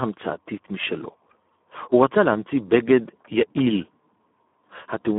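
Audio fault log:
Throughout, Speex codec: the speech carries heavy coding damage of a kind that fits a low Speex setting of around 8 kbps. A CELP coder models the vocal tract and spends very few bits on the excitation signal, so the voice comes through noisy and hoarse. The band also sits at a telephone-like 200 Hz to 3.5 kHz, with nothing above 3.8 kHz, so sibilants and upper detail are missing.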